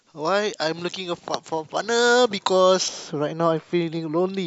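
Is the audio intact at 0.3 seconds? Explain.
No. At 0.3 seconds the clip is inside a stretch of pre-emphasis left on, running from 0.00 to 2.88 s. The treble was boosted for recording or transmission, and the matching cut was never applied afterward. High frequencies sit about 11 dB above 1 kHz at 10 kHz. The tilt fits a J.17 emphasis curve. The speech sounds thin, bright and harsh. Sibilants hiss and stand out too strongly.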